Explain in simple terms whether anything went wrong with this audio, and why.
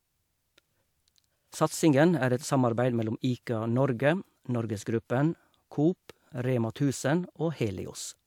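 Nothing went wrong with this audio, because no faults can be heard anywhere in the recording.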